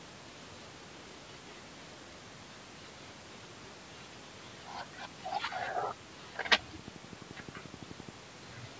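From 6.79 to 8.10 s, a train of clicks ticks at a regular 11.6 per second, around fifteen pulses standing roughly 10 dB above the speech, likely from nearby interference. They show as evenly spaced vertical lines on the spectrogram and sharp spikes on the waveform.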